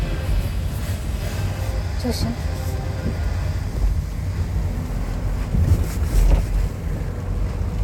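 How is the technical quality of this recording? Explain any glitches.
No glitches to report; the audio runs without any audible technical fault.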